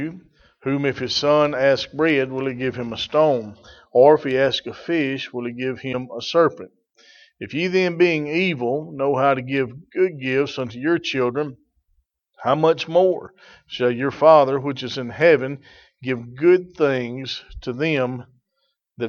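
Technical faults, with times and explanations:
5.92–5.95 s and 13.26–13.29 s, broken MP3 bit reservoir: brief 28–30 ms glitch skipping forward, likely from a lost frame, so the next frame decoded another frame's bytes.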